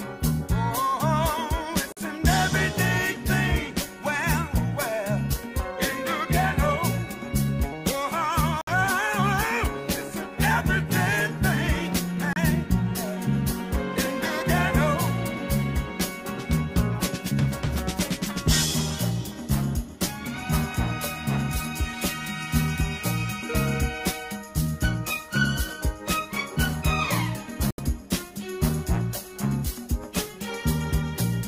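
The audio drops out completely four times, at 1.92 s, 8.61 s, 12.33 s and 27.71 s, for roughly 46, 61, 31 and 76 ms. Each hole is silent, and the sound picks up where it would have been had it kept playing, not where it stopped. This is likely a Bluetooth dropout: packets arrived too late at the headphones and were discarded. The gap lengths fit a few lost audio frames each time.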